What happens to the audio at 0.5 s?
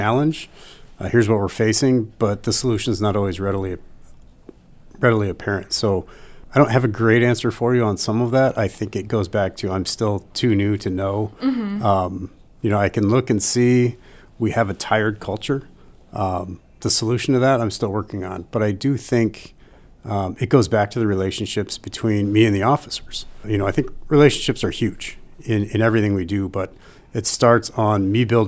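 Nothing goes wrong at 0.5 s; the speech plays through that moment intact, with no audible fault.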